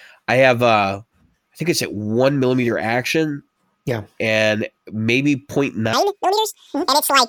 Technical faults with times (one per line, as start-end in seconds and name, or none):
5.93-7.29 audio read two samples at a time (double speed)